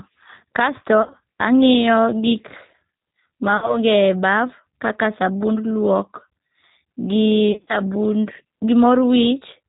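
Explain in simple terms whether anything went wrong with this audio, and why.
The speech sounds slightly rough and artificial all the way through, a little like a computer imitating a voice, and nothing high-pitched or crisp comes through. That is the G.729 codec, a phone-call compression system that doesn't send the actual sound. It sends a short description of the voice every hundredth of a second and rebuilds an approximation at the other end, cutting off everything above 4 kHz.

Three brief glitches stand out, from 1.02 to 1.15 s, from 3.57 to 3.78 s and from 7.52 to 7.74 s. At each one the voice turns buzzy or hissy, fades, and takes a moment to recover. This is VoIP packet loss concealed by the speech codec. Pieces of the call went missing in transit, and the receiver filled each gap by guessing from the last sound it had. The first and last gaps are broken up rather than continuous, and the longest single hole is 50 ms. 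Because each rebuilt piece of speech depends on the one before it, the voice stays weak briefly after the missing pieces stop.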